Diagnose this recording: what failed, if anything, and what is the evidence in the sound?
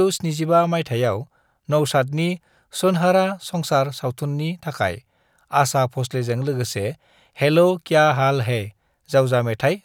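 No fault heard in this recording.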